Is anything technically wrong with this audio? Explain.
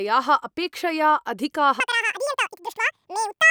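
Yes. From 1.80 s to the end of the speech, the audio is read two samples at a time. The reader treats each pair of samples as one frame. The speech runs at double speed and an octave higher.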